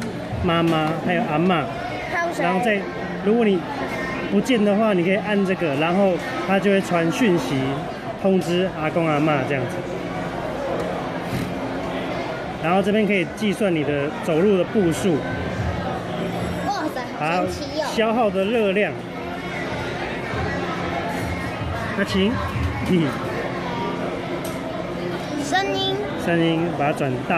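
No faults are audible anywhere in the clip.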